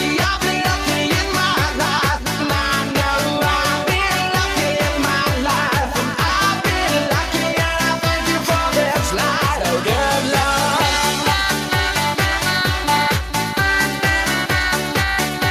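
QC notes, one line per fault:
No faults to note in this audio.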